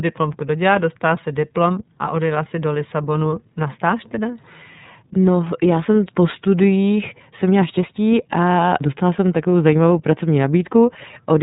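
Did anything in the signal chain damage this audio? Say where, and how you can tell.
Yes, at the codec stage: the whole speech clip shows iLBC codec damage. Nothing above about 3.8 kHz survives, and a plainly audible rough, synthetic texture suggests each frame's excitation is coded independently, which fits iLBC's 30 ms mode at roughly 13.3 kbps.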